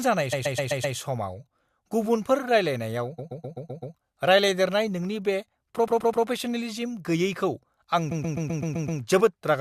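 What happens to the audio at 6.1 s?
Repeated frames, 5.87 to 6.25 s, after "रायलायदेरनाय नोंनि बे": a 128 ms block replays three extra times, a stutter adding 384 ms, unlike a dropout, which leaves a gap.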